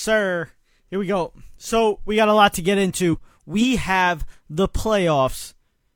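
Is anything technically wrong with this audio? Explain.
Yes. Between about 3.09 and 3.15 s the speech jumps forward: compressed frames were skipped, with roughly 40 ms of audio never played. The decoder discarded whole frames that were damaged or missing, so playback resumes further along. Unlike a dropout, there is no silent gap, and the continuing speech arrives slightly early.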